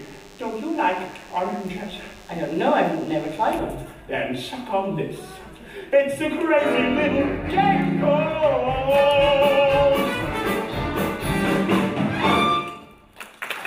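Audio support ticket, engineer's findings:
DECT cordless phone buzz, 0.00 to 3.59 s, then gone. Thin, steady buzz at 100 Hz with lots of harmonics, sitting well under the wanted sound, about 30 dB down. Probable culprit is a DECT handset or base parked near the kit. It fires a short radio burst every 10 ms, and the audio input stage rectifies it into that buzz. Move the phone away or shield the input.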